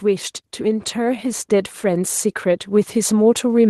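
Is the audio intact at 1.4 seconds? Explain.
No. At 1.4 seconds the automatic gain rising is still under way. It runs from 0.05 to 2.18 s. The gain control judged the input too quiet and lifted its gain by about 6 dB. The speech and the background swell together.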